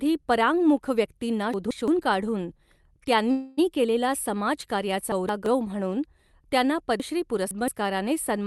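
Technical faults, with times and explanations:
1.54–1.88 s, 5.12–5.46 s (just before "म्हणून त्यांना") and 7.00–7.68 s (just after "म्हणून त्यांना"): chunks out of order. Pieces of about 170 ms play after the ones meant to follow them. In the first two spots one piece comes late, and in the last it comes about three pieces late. The speech sounds briefly jumbled. Unlike a dropout, nothing is missing.
3.31–3.59 s: call audio freeze. The last sound is held as a fading buzz for about 260 ms, with no full silence. The likely cause is packets held up in transit, leaving the jitter buffer empty. The speech then resumes where it stopped, so the moment is delayed rather than lost or reordered.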